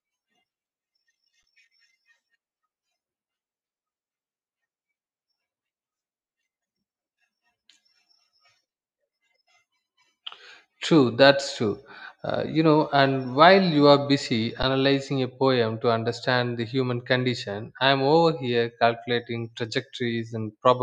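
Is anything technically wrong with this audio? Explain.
Yes. At 1.43 s and 14.63 s, an underrun with held sample: the output buffer emptied and the converter froze on its last value for 10 ms. The speech briefly flatlines, then resumes where it paused with only a soft edge.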